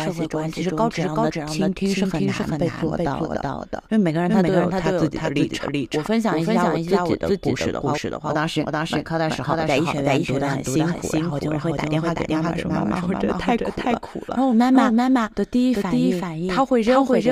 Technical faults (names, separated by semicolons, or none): doubled audio track